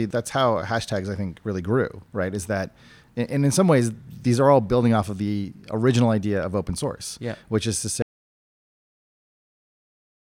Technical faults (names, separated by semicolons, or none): audio dropout to silence